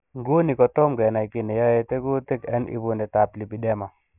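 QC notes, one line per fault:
Throughout: aliasing. The speech was resampled down to 6 kHz without a proper low-pass first, so everything above the 3 kHz fold point mirrors back down as false, unrelated tones. Sibilants come out gritty and metallic, with the folded junk sitting roughly 30 dB under the signal.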